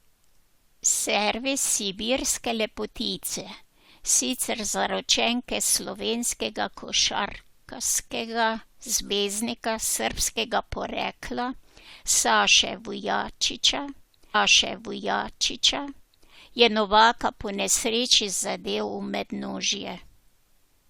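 A stream segment repeated at 14.34 s, running to 16.34 s: the player queued or fetched the same stretch of the stream twice, so about 2.0 s of the speech plays a second time, with a small blip at the jump back.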